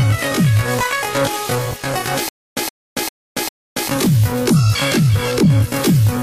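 From 2.29 to 3.88 s, a stutter with silent gaps: one 119 ms burst repeats four times every 399 ms, separated by 280 ms of silence. Likely a stalled stream replaying its last fragment at each retry, then running empty. The audio from that span is lost.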